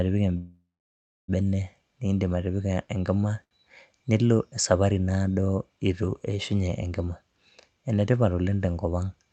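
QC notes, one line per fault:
0.37–1.30 s, call audio freeze: The incoming packets were likely held up in transit, draining the jitter buffer. The receiver carries the last sound on as a fading buzz or hiss that sinks into about 0.64 s of silence. When the packets arrive, the audio resumes exactly where it left off. Nothing is lost, but about 0.91 s of fill is inserted, and everything after it plays that much later.
2.67–2.94 s, jitter buffer slow-down: The jitter buffer was short of reserve, so the receiver repeated single pitch periods several times in a row to rebuild it. The passage plays at about 90% speed while keeping its pitch. Sounds are drawn out, and about 35 ms is added in total. Because the pitch does not drop, this reads as dragging rather than as tape-style slowing.
3.44–3.53 s, short stall from a late packet: One packet missed its playout time and left the buffer empty for a moment. 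The receiver stretched the sound it was playing for 71 ms until the packet arrived, then continued from the same point. Nothing is missing. What you hear is one sound held slightly too long, with a brief buzzy, flattened quality before normal playback resumes.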